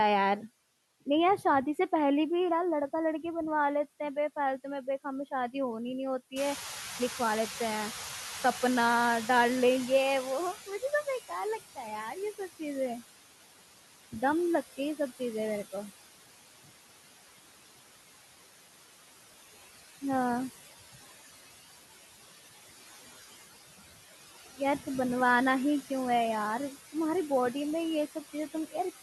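Noise suppressor artifacts run through the whole speech clip: the suppressor pulls down bands it judges to be steady noise by about 15 dB, frame by frame, so the residual background dips between phrases and swells under the speech.

At around six and a half seconds the room noise jumps by about 15 dB, and from 6.36 to 10.73 s the noise suppressor is catching up. Its noise estimate trails the new level, so the louder background passes with reduced attenuation, then settles to about 12 dB of cut over roughly 4.4 s.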